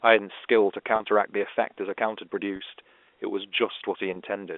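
Packet loss with pitch repetition struck at 0.96–1.00 s, 2.56–2.60 s and 4.14–4.16 s. The receiver repeated the last pitch period across each 40, 40 and 20 ms gap, leaving brief held, buzzy moments in the band-limited telephone speech.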